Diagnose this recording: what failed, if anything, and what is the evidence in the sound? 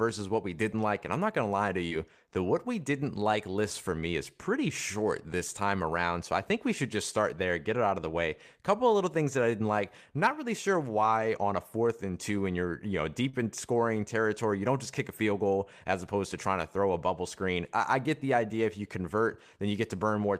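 Network stage: short concealed packet loss at 1.87–1.93 s and 13.29–13.35 s, 40 ms missing each, heard as brief smears where the decoder extrapolated speech.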